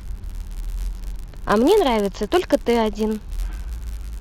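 From start to finish the speech carries a block size mismatch (padded): one stage hands over blocks slightly shorter than the next stage expects, so each block ends in a brief run of zeros. Those repeated gaps produce a steady buzz at 91.5 Hz, and the audio is stretched to 0.996 times its normal speed with pitch essentially unchanged. A waveform shows tiny flat dropouts every 10.9 ms, and a spectrogram shows faint vertical striations plus a comb of lines at 91.5 Hz multiples.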